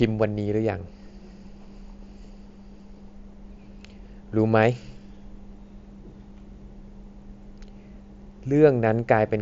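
Speech carried over a Bluetooth mSBC headset codec link, band-limited at about 7.7 kHz as that wideband path implies, with no technical faults to report.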